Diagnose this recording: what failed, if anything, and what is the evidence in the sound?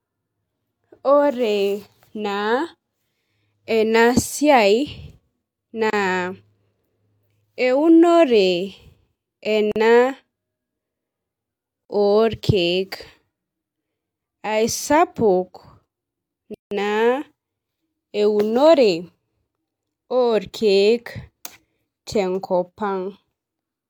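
Blocks of digital silence from a driver or buffer underrun: hard dropouts at 5.90 s (30 ms), 9.72 s and 11.85 s (43 ms each, fitting 2048-sample buffers), and 16.54 s (170 ms).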